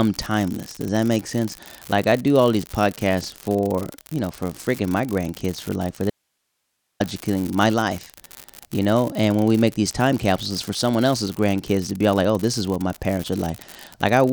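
From the start, an unreliable data bit runs through the whole speech clip. One data line is marginal, so its bit flips at random in some samples. Each flip adds a spike of equal size. The result is a steady crackle that continues through the pauses.

At 6.10 s, just after "grandkids for like for", an audio dropout to a faint residue begins. The speech cuts out abruptly for 0.90 s. Only hiss remains, far below the signal, roughly 55 dB down. The likely cause is a lost feed with the downstream path still live. The speech returns at 7.00 s on "my life".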